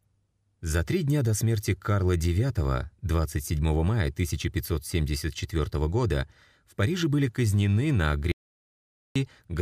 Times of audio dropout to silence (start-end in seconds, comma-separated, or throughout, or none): 8.32-9.16